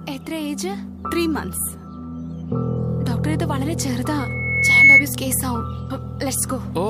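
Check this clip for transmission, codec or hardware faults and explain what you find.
One fault stands out: loudspeaker feedback squeal from 4.19 to 5.05 s. A pure, piercing tone near 2.2 kHz rises out of the audio, swelling over most of a second until it sits about 15 dB above the surrounding sound. The cause is a microphone picking up the loudspeaker it drives. At 2.2 kHz the loop gain exceeded one, so that frequency fed on itself and kept growing.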